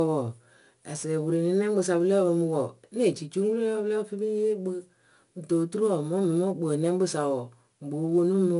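Throughout the speech, the audio has passed through 4-bit ADPCM compression, each sample coded as a coarse step from a prediction. That leaves a gritty hiss riding on every louder passage, with nothing above 10.6 kHz, which fits a sample rate near 22 kHz.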